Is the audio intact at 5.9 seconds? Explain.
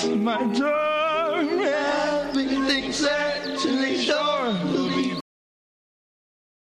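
No. At 5.9 seconds the music has already gone to dead digital silence. It stops abruptly at 5.21 s, mid-sound, with no fade or natural decay, and nothing returns from there to the end of the clip. This is a cut-off end: the final stretch of audio buffers was never written to the file or sent to playback, so the signal ends wherever the last delivered buffer did.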